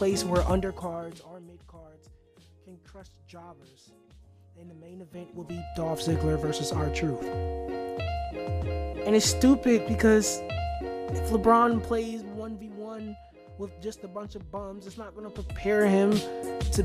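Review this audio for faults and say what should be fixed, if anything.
Nothing stood out on listening, so there is nothing here that needs fixing.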